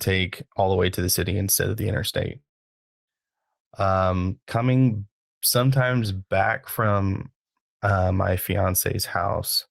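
Right after "instead of the interstate", at 2.39 s, the speech turns into a brief fading buzz and then near-silence until 3.1 s, with about 0.68 s lost, likely a long network dropout. Unlike a short packet loss, the concealment gives out and the gap stays empty.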